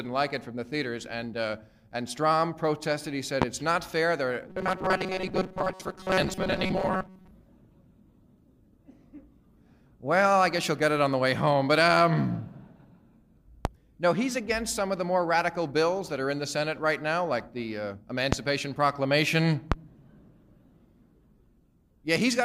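A likely electrical transient, such as a plug, switch, static discharge or driver glitch, injects a brief voltage pulse four times, producing a loud pop at 3.42, 13.65, 18.33 and 19.72 s. Each lasts about 40 ms and peaks about 20 dB above the sound, which continues beneath it. Between 4.49 and 7.31 s, new audio likely arrives too rarely and the playback path fills the gaps by looping its last short buffer. This produces robotic sound from repeated short buffers, in which most of the passage is repetition. The loop forces a fixed metallic buzz at 188 Hz, which fits a buffer of roughly 5.3 ms.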